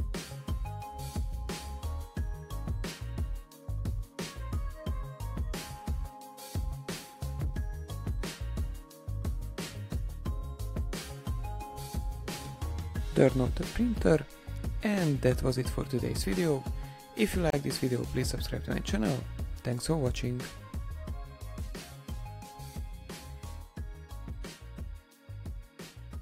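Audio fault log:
17.50 to 17.53 s, gap at a join of encoded pieces: a sudden 30 ms hole of silence with softened edges, after which the sound resumes exactly where it stopped. Two separately encoded pieces were joined untrimmed, leaving encoder start delay and end padding.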